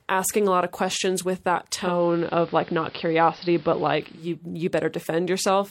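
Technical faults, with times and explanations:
1.67–4.39 s, digital radio blending to analogue: after "lot of questions with", the receiver drops its digital stream and cross-fades over 0.49 s to the AM broadcast. Speech shifts about 2 dB in level and gains faint hiss, then blends back.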